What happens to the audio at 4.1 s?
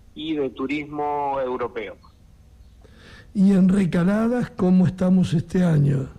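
Nothing goes wrong at 4.1 s; the audio plays through that moment without any audible fault.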